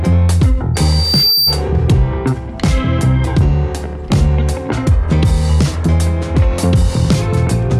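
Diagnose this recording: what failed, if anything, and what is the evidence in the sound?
What failed is loudspeaker feedback squeal in the acoustic loop between playback and the mic. From 0.74 s a 4.6 kHz tone swells over roughly 0.7 s to about programme level, then stops at 1.62 s. The loop gain crossed unity at that frequency.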